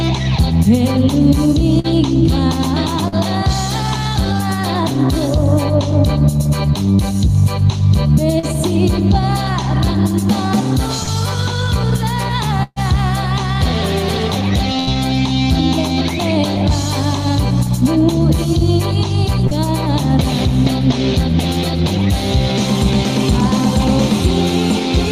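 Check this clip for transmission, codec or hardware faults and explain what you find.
Packet loss damages the transmission in four places, all concealed by the receiver extending the preceding sound.

Burst of packet loss, 1.79 to 1.87 s: about 40 ms of audio missing, bridged by a decaying continuation, heard as a brief held buzz or fading hiss.

Short concealed packet loss at 3.08 to 3.15 s and 19.47 to 19.54 s: 40 ms lost each time, patched from the previous sound's pitch or noise, leaving a quick smear or wobble.

Scattered short gaps, 8.39 to 14.90 s: about four separate losses totalling 280 ms, the longest around 150 ms, each filled by extension, giving intermittent ticks and hiccups.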